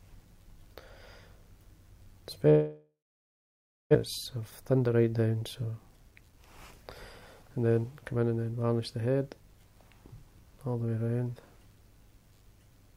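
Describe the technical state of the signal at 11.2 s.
At 11.2 s the signal is intact, with no audible fault at that point.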